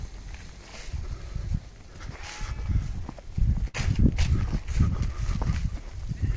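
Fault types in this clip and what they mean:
burst of packet loss: at 3.68 to 3.76 s, roughly 60 ms of audio went missing; the receiver stretched the last sound, fading it, then resumed further along.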